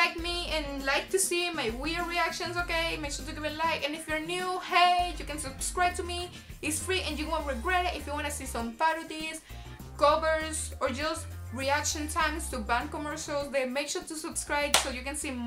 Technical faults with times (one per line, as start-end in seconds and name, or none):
1.85 overlapping chunks
5.85 overlapping chunks
9.86 overlapping chunks
13.87 overlapping chunks